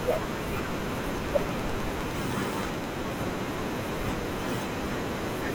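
A train of clicks runs from 1.18 to 2.85 s: some fifteen near-identical pulses at a steady 9.6 per second, standing well above the speech as a sharp ticking. The likely cause is electrical interference or a faulty connection or power supply injecting periodic impulses.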